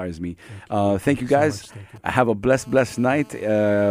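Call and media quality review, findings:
GSM signalling bursts, 1.64 to 2.58 s: nearby 2G handset in signalling mode, its radio pulses rectified in the audio input stage. Galloping dit-dit-dit ticks and short 217 Hz buzz groups under the speech, roughly 25 dB below it.

GSM phone buzz, 2.58 to 3.91 s: nearby 2G handset transmitting continuously as in a call, bursting at 217 Hz and rectified by the audio circuitry. Steady, hard, raspy 217 Hz buzz with dense harmonics, unrelated to the speech, about 28 dB below it.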